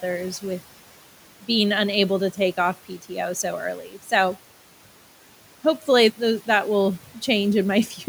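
A speech recording where the noise suppressor briefly cuts into the speech between 3.88 and 4.12 s, mistaking part of it for background and pulling it down by up to about 8 dB for around a tenth of a second, so that bit sounds swallowed. Room noise sits about 20 dB under the speech.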